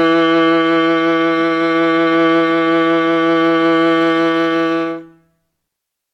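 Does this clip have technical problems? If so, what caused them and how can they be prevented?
Yes. The music opens with an adaptive stream starting at a low bitrate. From 0.0 to 4.0 s the treble is thin and synthetic, with nothing above 14.8 kHz and stronger codec artefacts. This points to a roughly 20 kbit/s HE-AAC version. At 4.0 s it jumps without a gap to fuller sound, consistent with a switch to 96 kbit/s AAC-LC. To prevent it, start playback on a higher-bitrate version or buffer until the connection has been measured.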